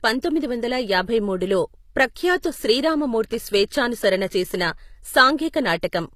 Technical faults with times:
0.00-6.16 HE-AAC compression
3.69-3.72 pre-echo
5.37 pre-echo

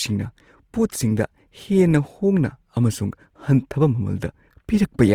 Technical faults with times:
0.00-5.15 Opus compression

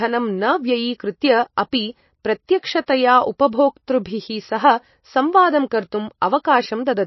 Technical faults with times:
0.00-7.07 MP3 compression

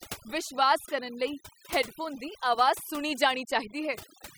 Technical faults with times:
0.00-4.38 overdone noise removal

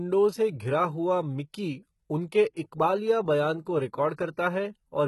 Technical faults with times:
0.00-5.07 HE-AAC compression

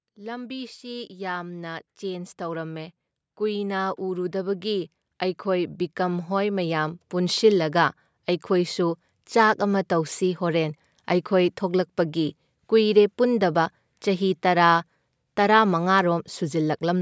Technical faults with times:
0.14-7.50 automatic gain rising

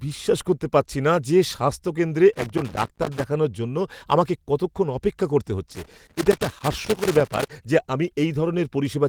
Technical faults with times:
2.33-3.24 loose connector crackle
5.71-7.51 loose connector crackle

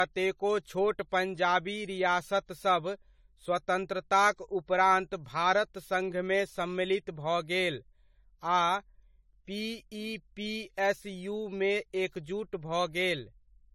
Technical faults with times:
0.00-13.74 generation loss

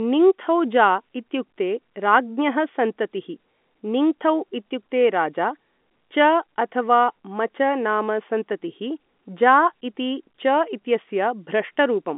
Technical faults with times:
none

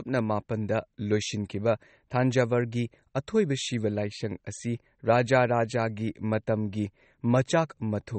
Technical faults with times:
0.00-8.18 MP3 compression

